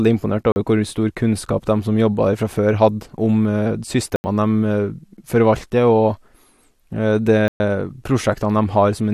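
Speech, with three blocks of digital silence: 40 ms at 0.52 s, 80 ms at 4.16 s, 120 ms at 7.48 s. Each is likely from an unfilled output buffer.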